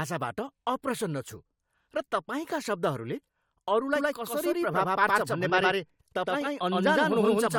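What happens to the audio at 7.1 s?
At 7.1 s the speech carries a doubled audio track, running from 3.96 s to the end: a second, equally loud copy trails by roughly a tenth of a second, likely from a slower capture path, so each onset is heard again as a distinct repeat. On a spectrogram every feature appears twice, offset horizontally; the waveform shows repeated transients.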